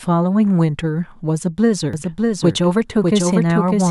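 A speech clip in which, from 1.93 s to the end, a second copy of the sound runs underneath the first, trailing it by roughly seven tenths of a second and sitting about 5 dB lower. The lagging copy is full-band and dry, with no decay or room colour, and it cuts in abruptly rather than building up. This is a doubled audio track, likely caused by the signal being captured a second time through a slower path and mixed back in with the original.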